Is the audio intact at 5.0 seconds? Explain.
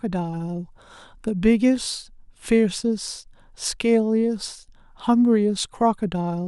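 Yes, the speech at 5.0 seconds is intact, with no dropout, click, distortion or other fault audible at that point.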